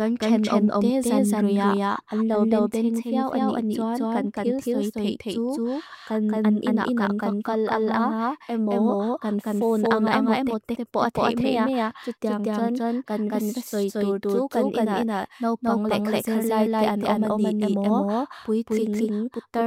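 From start to end, a doubled audio track: a second full-band copy, about equally loud, trails by roughly a fifth of a second, likely from a slower duplicate capture path.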